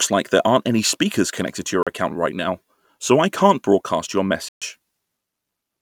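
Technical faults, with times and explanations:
1.83–1.87 s and 4.49–4.62 s, Bluetooth dropout: the wireless link likely failed to deliver audio packets to the headphones in time, and the late ones were discarded. The output falls silent for about 37 ms and then about 131 ms. The longer gap fits several consecutive packets being lost. When the sound returns it has moved ahead, as though it kept playing through the hole, so a slice of the speech is simply missing.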